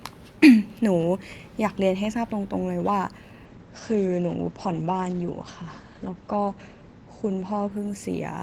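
It's a speech recording with a call bitrate drop starting at 3.47 s and running to the end. The sound turns rough and muffled, with the top end cut from 20 kHz down to 8 kHz. That fits the encoder falling from about 64 to 11 kbps, and it bottoms out for roughly 3.2 s.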